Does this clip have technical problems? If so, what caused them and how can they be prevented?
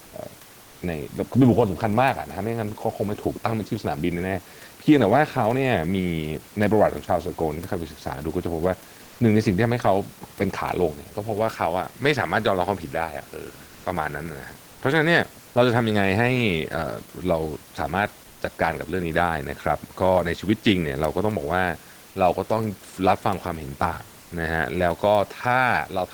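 Yes. Comfort noise in place of the background appears in four brief pauses: 9.03–9.19 s, 13.67–13.83 s, 14.71–14.79 s and 24.23–24.31 s. The room noise, about 28 dB below the speech, is swapped for steady synthetic hiss at nearly the same level, within about 1 dB, likely from Opus DTX. On a spectrogram those gaps show smooth, uniform texture instead of the room's detail. Disabling DTX on the sender prevents it.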